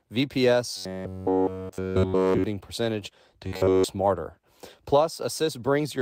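From 0.77 to 2.44 s, ending just before "percentage to", and again from 3.47 to 3.84 s, right after it, the speech turns into robotic sound from repeated short buffers: a rigid metallic buzz near 94 Hz. This is likely from a roughly 10.7 ms block being looped for essentially all of each span.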